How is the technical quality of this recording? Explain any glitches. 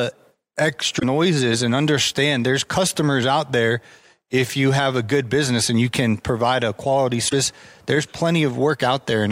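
Two short glitches spoil this speech clip. At 0.96–1.04 s, just before "and understand there's customers", and at 7.25–7.33 s, right after "can provide a quality", there's damaged data in a compressed stream. Corrupted bytes knock the decoder out of sync, so each spot comes out as a brief garbled blip.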